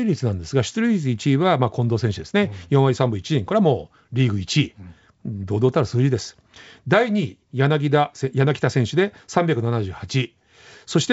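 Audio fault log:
The speech signal shows no faults: it carries the bandwidth of G.722 wideband telephone coding working normally, reaching up to about 7 kHz, and any coding trace is faint at most, which fits the codec's 64 kbit/s mode.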